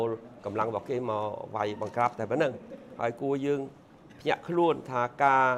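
A sudden voltage step, likely from a plug, switch, static discharge or driver glitch, entered the signal path at 0.62 s, and the circuits downstream shaped it into a brief pulse that lasted until 0.64 s. The result is a single loud pop, a sharp thump that peaks a few decibels above the surrounding audio. It sits on top of the sound rather than replacing it, so the material underneath continues straight through the disturbance.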